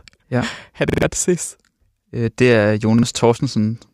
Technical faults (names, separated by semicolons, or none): repeated buffer